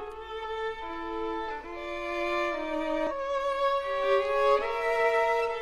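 At 3.07 to 3.13 s, damaged data in a compressed stream corrupts a few frames, so the decoder misreads them, loses sync and hunts for the next valid frame header. For roughly 60 ms the audio breaks into a short, harsh chirp or blip.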